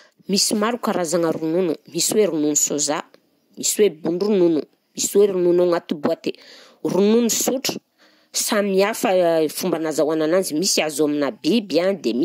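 A speech recording, with nothing technically wrong to be heard anywhere in it. No fault turns up at any point, so there are no times or causes to report.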